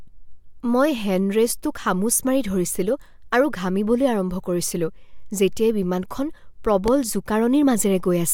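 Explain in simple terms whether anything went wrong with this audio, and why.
A loud pop hits at 6.88 to 6.90 s, far louder than the speech, which carries on underneath instead of cutting out; likely a sudden electrical jolt.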